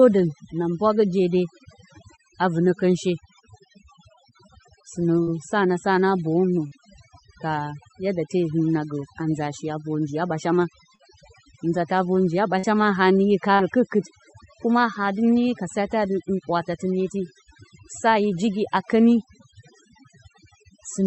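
Throughout, the background is near-silent and twinkling: overdone noise removal, where aggressive suppression cut whole frequency bands along with quiet speech detail.

Brief smears or wobbles occur at 5.23 s, at 6.67 s just after "na boyǝwnǝ", and at 10.95, 12.59 and 13.55 s. Each is short concealed packet loss, where roughly 40 ms of audio went missing and the receiver filled the gap by extending the preceding sound.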